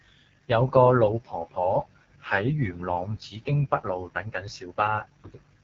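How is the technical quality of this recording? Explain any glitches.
The recording is heavily degraded by a low-rate AMR wideband (HD Voice) codec, present throughout. The speech sounds rough and raspy from start to finish. There is no content above about 7.6 kHz, so the top end is dull. This codec models the vocal tract and drives it with sparse pulses. At this rate there are too few bits for that excitation, so the speech becomes grainy and buzzy. The damage fits the lowest AMR-WB mode, around 6.6 kbit/s.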